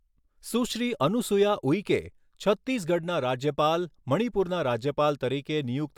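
No technical faults can be heard anywhere in the speech.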